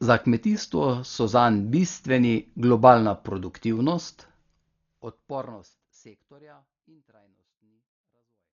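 Throughout the speech, the sound is dull, with nothing above 7 kHz. A rough, fluttering noise clings to the voice. The likely cause is Dolby Digital compression at a very low bitrate, around 40 kbps. Starved lines are filled with noise. The damage is heavy. It persists through the smooth fade-out from about 4 s.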